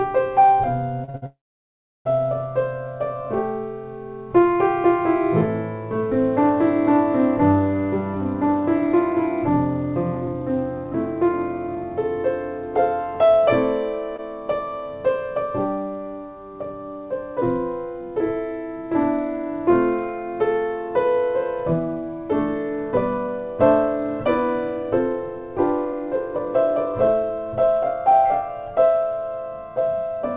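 Repeated stalls (stutter) run from 1.04 to 1.24 s. Packets arrived later than the playout needed, so the jitter buffer emptied three times in that fifth of a second. Each time, the receiver stretched the last sound to cover the wait, the longest gap about 58 ms. About 70 % of the span is filled-in material, so the audio catches and hiccups, although nothing is actually lost. The bandwidth stops at 4 kHz throughout, which fits a narrowband G.711 A-law call path.

A call audio freeze follows from 1.26 to 2.07 s. The sound hangs on a brief continuation of the last moment, then goes silent for roughly 0.7 s before resuming exactly where it stopped. The likely cause is packets held up in transit, leaving the jitter buffer with nothing to play. The whole pause, about 0.79 s, is inserted time rather than missing audio, and it pushes everything after it later by that amount.

A jitter buffer slow-down runs from 2.88 to 3.27 s. 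With its reserve running low, the receiver rebuilt it by repeating single pitch periods and fragments of pauses, adding 36 ms over that stretch. Playback drops to about 93 % of normal speed while the pitch stays the same. The effect is a slightly dragged, drawn-out passage.

Jitter buffer speed-up comes next, from 7.74 to 11.83 s at about 105 %. The buffer held more audio than its target, so the receiver cut out short pieces of one or a few pitch periods in a row, trimming roughly a fifth of a second overall. The pitch holds steady, but the pace presses slightly forward, a mild hurrying rather than anything chipmunk-like.

A short concealed packet loss lands at 14.16 to 14.20 s. About 20 ms of audio never reached the decoder in time. The receiver patched the hole by extending the preceding sound for roughly 19 ms, then blended back into the real signal. It comes across as a brief smear or wobble.

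Jitter buffer speed-up returns at 21.64 to 23.28 s and again at 24.70 to 28.49 s. The first burst is noticeably rushed, at about 114 %, removing around a fifth of a second. The second runs at about 110 % and removes around 0.4 s. In both, the pitch is unchanged while the timing compresses, giving a clipped, hurried feel as the buffer sheds its excess delay.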